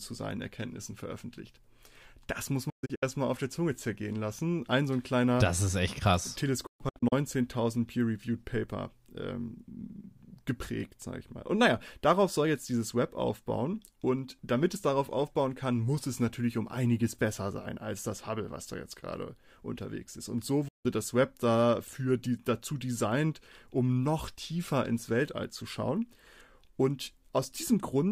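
Speech that cuts to silence three times, each with a quick 8 ms fade: from 2.70 to 3.03 s as a few short holes before "auf der", from 6.66 to 7.13 s just after "das ist echt krass", and once more from 20.68 to 20.86 s. This is a digital broadcast dropout. The receiver muted whenever frames failed or went missing, with holes that fit whole 32 ms frames. The audio sent during those gaps is gone.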